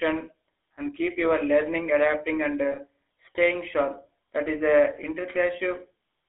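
GSM full-rate coding runs throughout: the speech is rebuilt from a vocal-tract model and sparse pulse excitation, giving plainly audible buzzy, gravelly roughness within a 300 Hz to 3.4 kHz telephone band.

Lost GSM frames follow from 2.72 to 2.78 s, between "your learning adapting and" and "staying sharp". The decoder repeats the last good frame, leaving a brief metallic ring consistent with one missing 20 ms frame.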